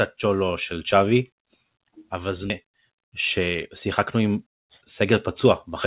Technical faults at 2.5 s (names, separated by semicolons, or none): skip ahead